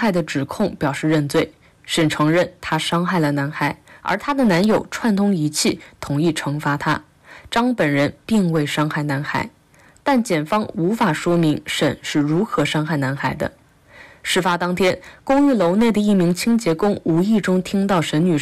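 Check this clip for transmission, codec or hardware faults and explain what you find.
Hard clipping runs through the whole clip. The signal reaches some stage about 10 dB hotter than it can pass. Every peak above that ceiling is cut off flat. Around one sample in twenty is affected. Those squared tops add harmonics high into the spectrum that were never in the source. The result is a harsh, gritty fuzz on each loud moment. Quieter passages stay cleaner, but the distortion returns whenever the level rises.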